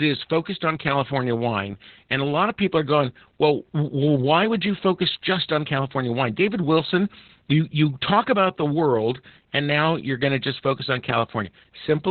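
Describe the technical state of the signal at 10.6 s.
At 10.6 s the speech carries Opus voice compression, which runs throughout. Nothing survives above about 4.3 kHz. The harsh linear-prediction coding sounds muffled and hoarse, fitting roughly 8 kbps.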